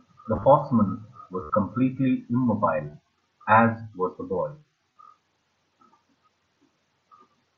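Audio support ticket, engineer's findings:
Concealed Bluetooth headset packet loss at 0.36–0.45 s (about 60 ms lost, scattered), 1.43–1.50 s, 2.91–2.94 s, 4.92–4.96 s. Gaps filled by repeating best-matching recent waveform. Buzzy held tone, slight warble on recovery. Link dropouts between headset and phone. mSBC band intact to 8 kHz.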